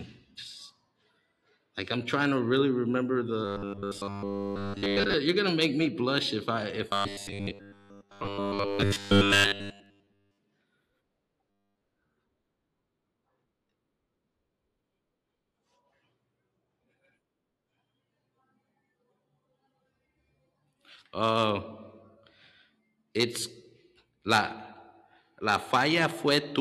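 Robotic sound from repeated short buffers at 3.45–5.14 s (after "trying to really remember"), 6.91–10.38 s (after "blush if I if") and 11.50–11.81 s: a metallic 100 Hz buzz, likely from a 10 ms chunk replayed constantly, shows as evenly repeating waveform cycles and dense harmonics every 100 Hz on a spectrogram.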